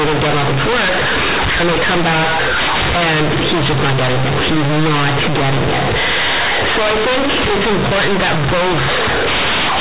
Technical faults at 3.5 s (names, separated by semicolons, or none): companded audio read as linear